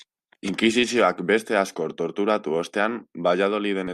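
No technical faults can be heard anywhere in the speech. Nothing in the audio calls for a timestamp or a description of something going wrong.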